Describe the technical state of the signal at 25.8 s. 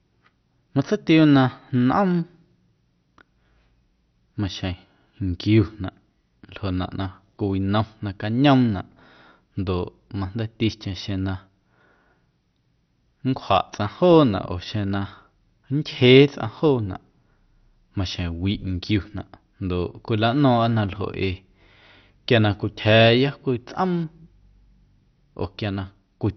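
At 25.8 s the speech carries the same damage heard throughout the clip, most likely MP2 compression applied heavily. Nothing survives above about 6.1 kHz, so the sound is dull, and a gurgling, granular roughness sits on what remains. Layer II divides the spectrum into 32 equal sub-bands and, starved of bits, shuts off the upper ones while coarsely quantising the rest, which fits a rate near 48 kbps. A plain low-pass filter would dull the sound just as much, but it would not add this grainy, bubbling texture.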